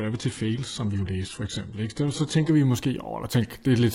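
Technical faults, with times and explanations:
0.0–2.5 s, adaptive stream starting at a low bitrate: the player opened on a low-rate version to start quickly. Speech has nothing above 11.1 kHz, with heavier codec artefacts, pointing to something like HE-AAC at 12 kbit/s, until an abrupt, gapless step up, fitting AAC-LC at 96 kbit/s.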